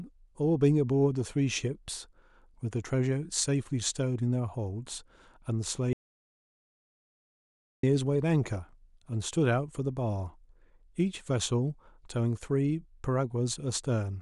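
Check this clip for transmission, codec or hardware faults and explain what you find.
There's one clear fault. From 5.93 to 7.83 s there's an audio dropout to silence: the speech cuts to silence for about 1.9 s, no room tone, most likely a lost input link.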